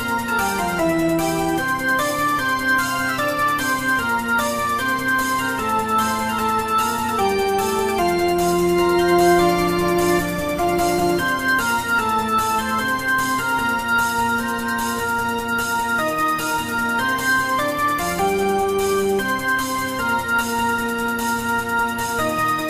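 No technical faults can be heard anywhere in the audio.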